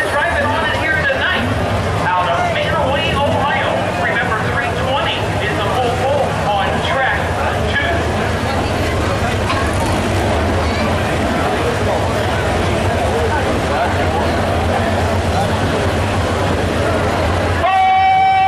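No technical faults can be heard anywhere in the audio; the signal stays steady and intact throughout.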